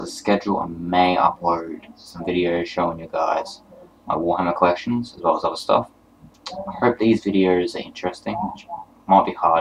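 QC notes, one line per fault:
No faults heard anywhere in this audio.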